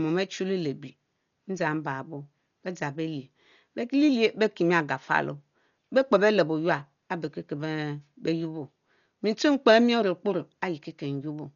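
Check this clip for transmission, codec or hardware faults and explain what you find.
The speech carries one codec fault for its whole length, likely Dolby Digital compression. Heavy damage fits a low bitrate around 48 kbps: the encoder has cut everything above 7 kHz and starved many frequency lines of bits, so the decoder fills them with noise, leaving the speech dull with rough, fluttering noise around tonal parts.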